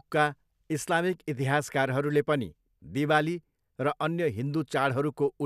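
No technical faults are audible.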